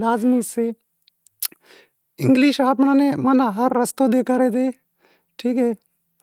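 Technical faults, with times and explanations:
No technical faults are audible in this speech recording.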